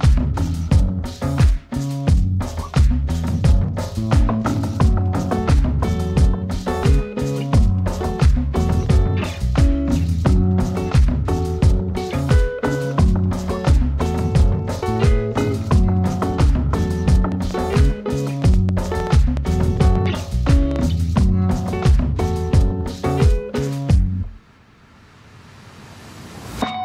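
From 17.32 to 21.20 s, a burst of sharp ticking and popping cuts across the sound, including its quieter gaps. Around fifteen near-identical clicks arrive at about 3.6 per second, unevenly spaced, with peaks standing a little above the surrounding level. This train of clicks is likely caused by an outside source repeatedly injecting pulses into the signal path, such as interference from nearby equipment or a faulty connection or power supply.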